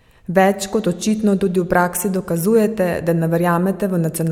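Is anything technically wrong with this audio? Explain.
No, nothing technically wrong turns up here; the speech comes across just as it should, with nothing to flag.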